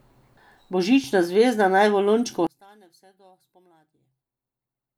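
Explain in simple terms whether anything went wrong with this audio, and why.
From 2.47 s to the end, the speech suddenly drops to a faint trace and nearly disappears. The likely cause is one channel inverted: one stereo side is flipped upside down, so when both sides are combined, the shared voice cancels itself out.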